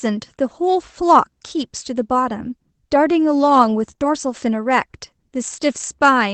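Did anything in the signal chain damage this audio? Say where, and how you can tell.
Yes. At the network stage there is a short concealed packet loss: three consecutive 20 ms packets went missing from 3.91 to 4.02 s. The decoder extended the preceding sound across them, heard as a brief smear.

At 4.02 s a lost packet was rebuilt from error correction. The next Opus packet's low-bitrate copy fills those 20 ms, so the sound turns briefly rougher and noisier.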